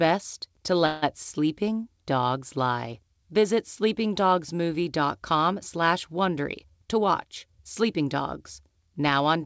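At 0.86 s the speech stops moving forward. For about 160 ms, until 1.04 s, the last sound is held and stretched into a fading buzz or hiss. This is a call audio freeze. Packets were likely delayed in transit, and the jitter buffer ran dry. The receiver filled the wait by extending what it already had. When the packets arrived, the speech resumed exactly where it left off. Nothing is lost, but a pause now sits inside the audio. The delay grew by that same amount.

From 6.44 s to 8.15 s the speech runs fast, at about 109% of normal speed. The pitch stays the same, so it sounds hurried rather than raised. This is a jitter buffer speed-up. The buffer held more audio than its target, as after a late burst of packets. To cut the extra delay, the receiver removed many short slices of one or a few pitch periods in quick succession. Roughly 150 ms was trimmed in total.

Throughout, the call path has a band limit, with no content above 8 kHz. 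This fits a G.722 codec at 64 kbps.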